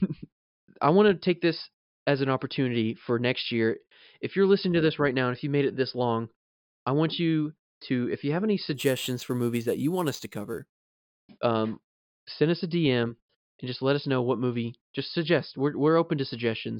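Speech, and between 8.74 and 10.92 s there's imaging from sample-and-hold upsampling: a bright metallic fizz about 18 dB below the speech, with its lowest copy between 5.5 and 11 kHz. It fits 11 kHz audio raised to 48 kHz by repeating samples without a smoothing filter.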